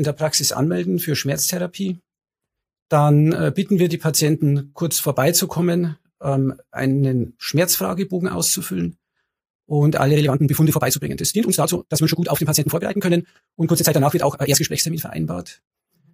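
From 10.09 s to 15.05 s the audio jumps into a time-stretched section, running about 1.74 times faster while its pitch stays put. The likely cause is software squeezing this stretch to fit a shorter length, dropping short slices to keep pitch intact. It sounds rushed. On a spectrogram, harmonic bands keep their height but events crowd closer together, and the waveform shows compressed envelopes with small seams where pieces were cut.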